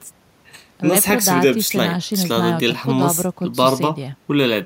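Listening through the speech recording, nothing stood out as a technical problem at any point.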